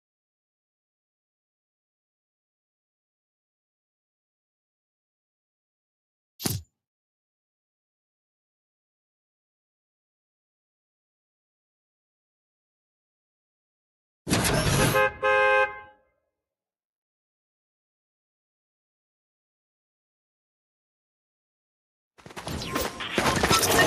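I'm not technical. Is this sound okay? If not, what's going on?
No, there's one brief glitch: around 15.9 to 16.11 seconds, the noise suppressor mistook part of the sound for noise and cut it, so it briefly dips.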